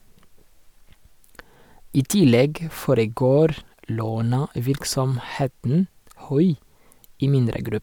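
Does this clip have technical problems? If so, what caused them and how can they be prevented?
No, this clip has no technical problems, so there is nothing to prevent.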